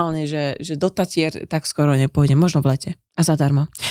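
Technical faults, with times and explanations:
No technical faults can be heard.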